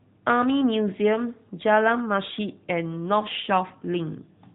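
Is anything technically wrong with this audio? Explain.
Yes. AMR narrowband mobile codec damage runs throughout: everything above 4 kHz is gone, and the pulse-driven vocal-tract model makes the speech plainly buzzy and synthetic, which fits a mid-rate mode around 10 kbps.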